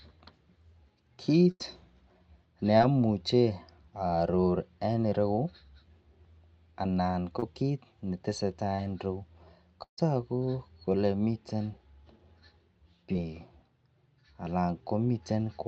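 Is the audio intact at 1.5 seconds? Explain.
No. A burst of packet loss hits from 1.51 to 1.62 s. Packets arrived too late or not at all. The receiver stretched the last sound for about 83 ms, fading it out. About 80 ms of the speech is skipped before playback resumes.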